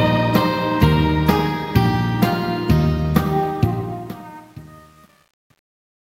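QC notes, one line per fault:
3.44 to 6.14 s, truncation distortion on a fade: as the fade-out (starting around 3.4 s) sinks toward silence, the level stage drops bits without dither. The tail turns gritty, worst from 3.93 s onward, which fits roughly 9-bit resolution. On the waveform the decaying shape collapses into a few flat square steps. The spectrogram shows broadband hash instead of a clean taper.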